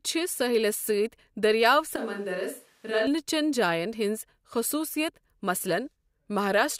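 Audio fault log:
1.96–3.07 s, switch to a distant microphone: the voice abruptly turns roomy and hollow, thinner in the bass and about 5 dB quieter, with room noise rising to roughly 35 dB below the speech, then snaps back to the close sound just before "چن جاین ہِنٛز خصوٗصِیت". The likely cause is the close microphone dropping out so a far pickup carries the speech. A plain gain dip would lower the level without adding room tone, and added reverb would not strip the bass or raise the noise floor.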